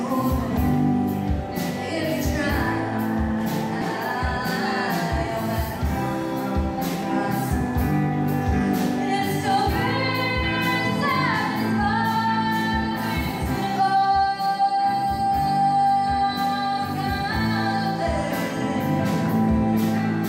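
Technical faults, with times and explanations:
3.81–3.83 s, skip ahead: playback jumps forward with no fill, losing roughly 0.4 s of audio. A stretch was dropped while later audio was already queued, and both sides of the cut are spliced almost directly, so the sound lurches abruptly.
4.37–4.50 s and 13.79–14.63 s, jitter buffer speed-up: the buffer held excess audio and trimmed short pitch-period segments repeatedly. Playback runs at 137% then 110% speed at unchanged pitch, removing roughly 50 ms and 100 ms, which sounds briefly hurried.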